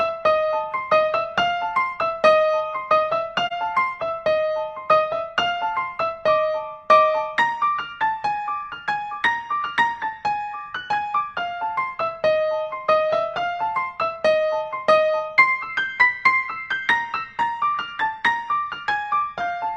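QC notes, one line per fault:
3.47–3.53 s, AAC frame loss with muting: a short, soft-edged hole of about 43 ms, which fits a single lost frame. With that frame's data missing, the decoder fills its spectrum with silence, and the overlapping transform windows on either side blend into that zeroed block. The sound therefore fades down into the gap and back up out of it over roughly one frame's length, instead of stopping and restarting abruptly.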